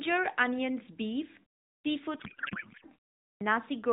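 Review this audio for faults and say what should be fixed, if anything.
Clipped start after a pause at 1.68 s and 3.23 s: after silences of about 0.3 s, roughly 0.17 s and 0.18 s of sound vanish as the output device wakes. Muted pauses return in time, but here the onsets themselves are swallowed.

Codec payload misread from 2.20 to 2.85 s: the speech turns into garbled warble that barely tracks it, which fits octet-aligned AMR being read as bandwidth-efficient. Ordinary low-bitrate AMR buzz still follows the speech; this does not.

To prevent both, keep the output device active through pauses and make sender and receiver agree on the AMR payload format during call setup.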